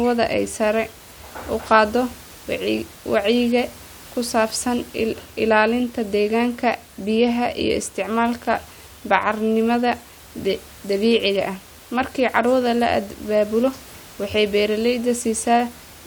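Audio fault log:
Nothing to flag here, just a bit of room noise sitting about 24 dB under the speech, which comes from the space the microphone was in.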